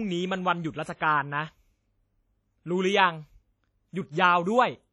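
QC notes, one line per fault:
Throughout: WMA compression, likely, given how the damage behaves. The speech carries a ringing, washy smear, and a hiss that swells and fades with the level, because quantisation noise from long transform blocks spreads over tens of milliseconds. Quiet detail drops out where weak lines get zeroed, and nothing sits above 13.9 kHz. The damage is heavy, which fits an early WMA encoder running around 32 kbps.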